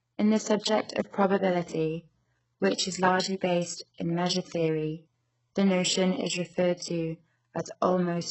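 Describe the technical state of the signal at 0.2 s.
At 0.2 s, as throughout, the speech shows likely HE-AAC compression: treble copied up from lower bands sounds gritty and metallic rather than simply dull, and nothing reaches above 8 kHz.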